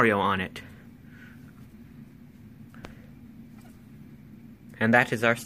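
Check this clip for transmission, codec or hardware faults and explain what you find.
One hardware-type fault is present. A loud pop at 2.85 to 2.87 s is a single sharp transient standing a few decibels above the sound, which continues underneath. It is likely a brief voltage step from a plug, switch or static discharge, shaped by the downstream circuitry into a short click.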